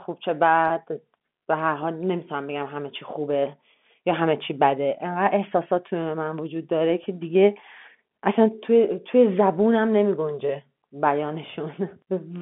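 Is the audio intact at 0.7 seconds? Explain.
No. Between 0.68 and 0.70 s about 20 ms of audio went missing, which fits a single lost packet, and the receiver concealed the packet loss by pitch repetition, replaying the last pitch period. The speech there sounds briefly held, with a slight buzzy sustain.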